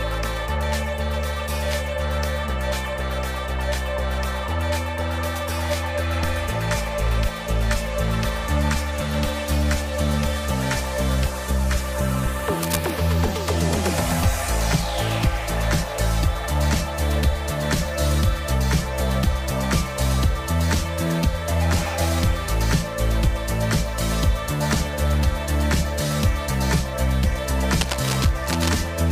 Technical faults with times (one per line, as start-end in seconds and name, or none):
12.63-12.90 cable scratch noise
27.78-28.69 cable scratch noise